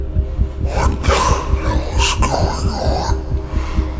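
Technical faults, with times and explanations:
Throughout: wrong sample rate. The audio is being played out more slowly than it was captured, with no rate conversion, which fits 24 kHz material clocked out at 16 kHz. Everything runs at two-thirds speed and sits about 7 semitones lower, sounding low, dragged and sluggish.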